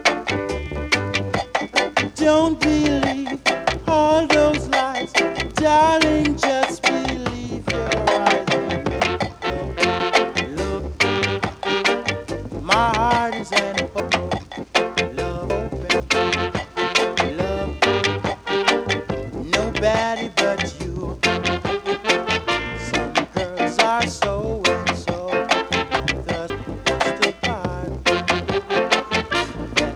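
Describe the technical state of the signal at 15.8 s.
Chunks out of order affect the span from 14.0 to 16.0 s, and 15.8 s falls inside it. Over these two seconds, one 500 ms block of audio arrived late and plays after the three blocks that should have followed it. Nothing is missing, but the sequence is scrambled. At 15.8 s the signal is part of that displaced block. The stretch sounds jumbled, with hard joins where out-of-order blocks meet.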